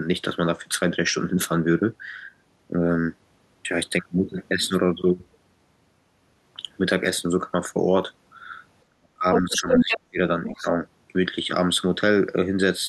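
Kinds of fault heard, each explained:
Speech suppressed in double talk: The talker's speech drops sharply three times near the end. It falls away from 8.9 to 9.26 s and again from 9.42 to 10.19 s. At its deepest it sinks by about 40 dB, close to silence. A brief, shallower dip follows at 10.62 to 10.67 s. This is likely an echo canceller that heard both sides at once. It could not split its own talker from the loudspeaker echo, so it turned everything down.
Other side's voice leaking through: A second voice comes through the microphone in two stretches. The first runs from 9.33 to 9.97 s and is louder than the talker, by roughly 5 dB. The second, from 10.44 to 10.71 s, sits well below the talker's level. This is likely the far end playing from the device's loudspeaker. The echo canceller failed to remove all of it, and it overlaps the suppressed speech.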